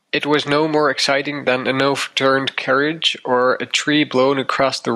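Throughout the speech, the level pumps, swinging by around 10 dB, and loud and quiet passages sit unnaturally close in level, giving a flattened, squeezed sound. This is gain pumping, likely from the input gain being set far too high for the microphone, so that a fast limiter or compressor clamps down on every peak and then lets the level climb back between them.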